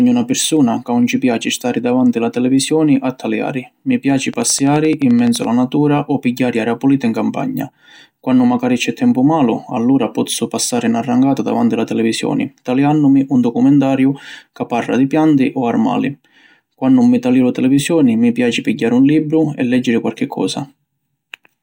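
A speech clip with a train of clicks from 4.34 to 5.45 s, about a dozen a second, evenly spaced and peaking about 5 dB above the speech, likely interference or a faulty connection or power supply.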